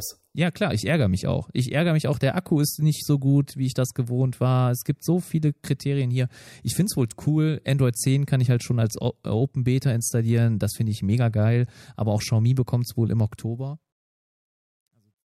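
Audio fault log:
13.23–15.32 s truncation distortion on a fade: after "bekommt es wohl im", the fade-out turns gritty, worst from 14.66 to 15.33 s. Undithered rounding, which fits a 12-bit stage, makes the grain worsen as level falls, unlike steady hiss.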